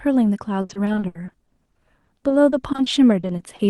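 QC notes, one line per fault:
0.61–3.61 s, repeated packet loss (robotic sound): 22 short dropouts back to back, the longest about 70 ms. Each hole gets patched by stretching the previous sound, so roughly 18% of the stretch is patched-over sound and it turns choppy, with chunks simply gone.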